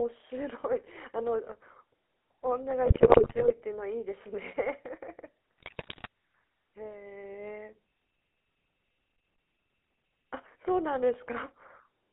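From start to finish the speech has a buzzy, gravelly roughness and a thin, boxed-in tone, with nothing below about 300 Hz or above about 3.4 kHz. This is the GSM full-rate codec, and the damage is plainly audible. It models the vocal tract as a filter and drives it with a sparse, regularly spaced pulse train in place of the real excitation. The grainy rasp and narrow band fit the 13 kbps full-rate coder.

From 2.86 to 3.62 s the speech breaks into squawks, pops and gargling, and it happens again from 5.58 to 6.07 s. These are GSM bit errors. Flipped bits reached the decoder and corrupted the filter, pitch and gain values, so frames came out with a bent spectrum or a sudden jump in level. The damage in the second burst fits a heavier error rate than in the first.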